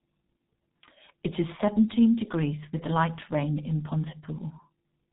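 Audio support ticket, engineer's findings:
G.723.1 codec damage, heavy, present throughout the speech. Muffled, hoarse tone. Consonants smeared. No content above 3.8 kHz. Probable component: legacy VoIP leg encoding with G.723.1. Sound points to its 6.3 kbit/s mode. Mechanism: coarse 30 ms frames, slowly updated voice model, narrow passband. Fast transitions blur; high-frequency detail is gone. Fix: renegotiate to a wideband codec on that leg.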